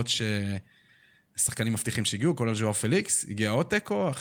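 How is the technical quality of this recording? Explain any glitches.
No audible glitches or faults.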